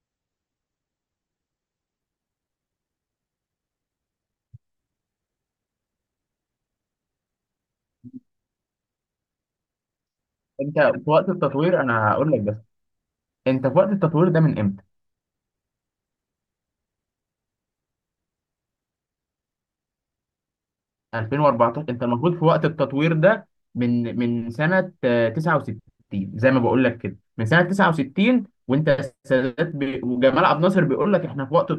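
The player opened this adaptive stream on a low-quality rendition so the speech could begin at once, then switched up at 2.0 s after measuring the connection, a case of an adaptive stream starting at a low bitrate. From 0.0 to 2.0 s the treble is missing or synthetic and codec artefacts are stronger, a sound that points to an MP3 at around 32 kbit/s. At 2.0 s brightness and clarity return abruptly with no gap, consistent with a step up to roughly 128 kbit/s.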